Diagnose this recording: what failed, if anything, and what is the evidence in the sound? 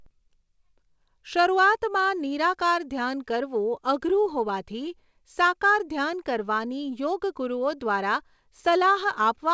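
Clock drift between sender and receiver, at the jitter buffer. The sender's clock runs about 2% slow, so the buffer keeps draining. Throughout the clip, small timing hiccups recur at uneven intervals over G.722 audio with nothing above 8 kHz.

Repeated timing corrections run from 0.00 to 9.24 s as the receiver repeats short pieces to refill the buffer. The net effect is playback at 98% speed, adding about 150 ms overall. It is heard, if at all, as slight stumbles and an unsteady tempo, always stretching.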